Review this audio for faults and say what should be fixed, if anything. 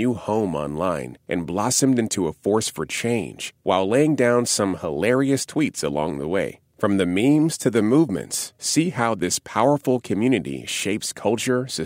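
No faults found on review of the speech recording; nothing needs fixing.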